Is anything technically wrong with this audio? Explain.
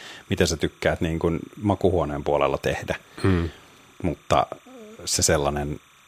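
Yes, timecode bleed runs through the whole recording. Linear timecode from an adjacent track or cable has leaked into the speech path. Its biphase square wave flips between tones near 1 kHz and 2 kHz as the bits change, at a 29.97 frames-per-second rate, sitting roughly 30 dB below the speech. It is heard as a faint, constant chirping warble behind the talker. A spectrogram shows steady striated bands around 1 kHz and 2 kHz with odd harmonics above, continuing through the pauses. The waveform shows a low, persistent buzz in the gaps between speech.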